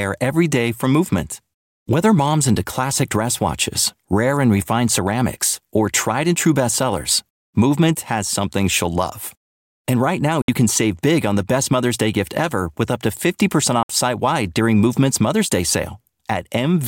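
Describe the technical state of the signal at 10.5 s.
Speech cuts to silence from 10.42 to 10.49 s and resumes as if it had played on. This is a Bluetooth dropout, likely caused by packets reaching the headphones too late.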